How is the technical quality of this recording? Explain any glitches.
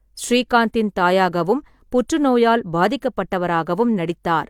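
No glitches can be heard anywhere in the recording. There is nothing in it that needs explaining.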